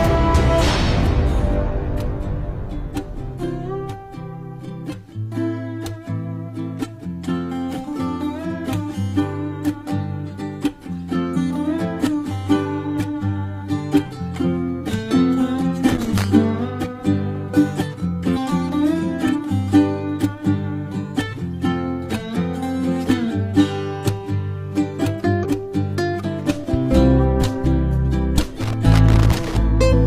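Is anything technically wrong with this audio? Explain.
Yes, there are two kinds of fault.

Compressed frames skipped occur at 0.58, 11.33, 18.33, 25.41 and 29.89 s. Whole blocks of coded audio never reach the output, either because they are missing or because the decoder rejected them as damaged. The sound jumps ahead by multiples of a 42.7 ms frame: roughly 300 ms at the first point, about half a second at the middle three, and roughly 150 ms at the last. Each join is brief, about 50 ms long.

Loose connector crackle runs from 15.89 to 16.24 s and from 28.60 to 29.57 s. A worn or dirty contact in the signal path keeps making and breaking as it shifts, so the audio is chopped on and off and any DC on the line adds pops. The result is an irregular scratchy burst, short in the first case and close to a full second in the second.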